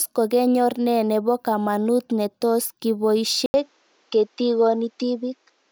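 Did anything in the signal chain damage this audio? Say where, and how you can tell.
Yes, at the driver stage. At 3.46 s there is an 80 ms gap, then nothing above 7.7 kHz and a new faint noise floor. The likely cause is an input switched to a poorer device.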